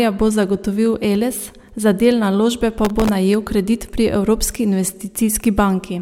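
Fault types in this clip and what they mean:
processor overload crackle: From 2.85 to 3.09 s a gritty tearing rides on the speech as around twenty buffers, each under a millisecond, miss their deadline and replay old audio with hard edges. Unlike clipping, it ignores loudness; unlike a single dropout, it's a dense burst.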